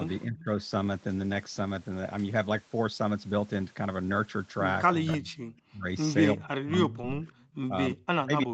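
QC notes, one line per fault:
0.07–0.44 s, 5.31–6.48 s and 7.27–7.55 s: echo leak. The likely cause is that the far side is on a loudspeaker and its echo canceller let part of the returning speech past its microphone, sending it back down the line. This shows up as a faint second copy of the speech trailing the original by 344 ms. It sits about 20 dB below the speech in the first stretch, about 25 dB in the second and about 30 dB in the third.
0.25–0.49 s and 4.94 s to the end: speech suppressed in double talk. The likely cause is that while both ends were active, the canceller could not tell the near talker from loudspeaker echo and attenuated everything. In the first stretch the speech drops by roughly 25 dB in pieces totalling about 200 ms. From 4.94 s onward the dips reach roughly 35 dB, so the speech keeps fading and breaking up through the rest of the clip.
5.11–5.15 s and 7.01–7.05 s: short concealed packet loss. 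Twenty milliseconds of audio arrived too late for the decoder each time, and the receiver patched the gap by extending the preceding sound, for 19 ms and then 17 ms, before crossfading back into real audio. Each patch comes across as a brief smear or wobble in the speech. The whole clip is band-limited to 8 kHz, which fits an Opus call path at around 32 kbps.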